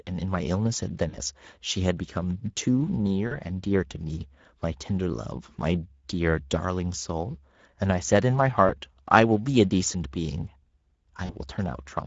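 The whole clip carries Speex codec damage, plainly audible as a hoarse, noisy texture, which fits a rate around 16.8 kbps. At 1.09–1.18, 3.27–3.35, 8.67–8.71 and 11.25–11.35 s, packet loss concealed by the speech codec smears the sound into a fading buzz or coloured noise.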